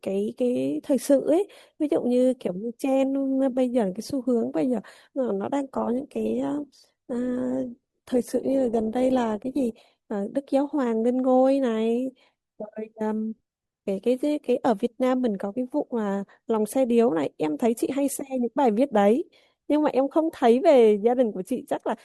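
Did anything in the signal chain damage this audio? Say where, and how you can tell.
Yes. From 5.74 s to 9.74 s the speech suddenly fills with codec artefacts, then snaps back with no gap. This is an adaptive stream at a lower bitrate: the network slowed, and the player switched to a heavier-compressed version, which fits a drop from around 64 to 16 kbit/s Opus.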